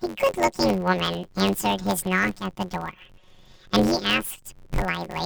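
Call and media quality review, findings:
Planar audio read as interleaved, throughout. Speech carries a robotic buzz at about 92 Hz with no clear octave shift. The channel-separated 10.88 ms blocks are consumed as alternating pairs, so each block plays twice at double speed. Spectrogram shows 92 Hz comb striping. Waveform repeats in 11 ms pairs.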